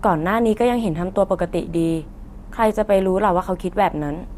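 From 1.15 to 1.24 s the speech is overlaid with brief burbling blips. This is DAB burbling: weak reception let bit errors, at a low rate of around a twentieth of a percent, slip past error correction into the MP2 data. Corrupted samples put short blips of noise into individual sub-bands, and the roughly 90 ms span had six damaged frames.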